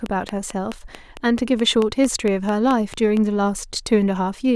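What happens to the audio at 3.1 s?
A train of clicks ends at 3.18 s, after regular ticks at 4.5 per second from 0.06 s, likely pulses from interfering equipment, each about 10 dB above the speech.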